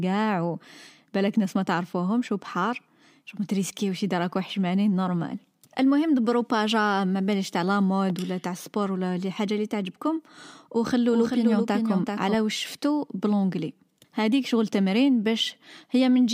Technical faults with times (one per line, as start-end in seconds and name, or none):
11.08-12.34 doubled audio track